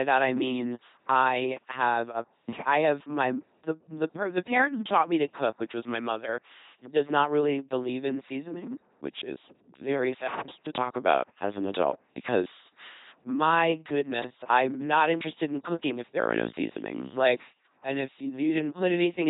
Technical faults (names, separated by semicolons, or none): LPC-10 vocoder